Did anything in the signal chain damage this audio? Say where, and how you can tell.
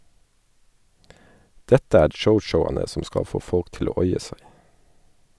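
No, nothing in the signal chain damaged this speech recording. At no point in the audio can any stage of the chain be heard leaving a mark on the sound.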